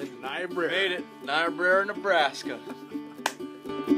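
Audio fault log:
The signal carries no audible technical faults at any point in the clip.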